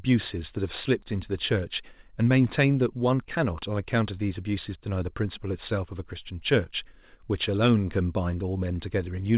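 Listening through this speech recording, nothing stood out as a technical problem.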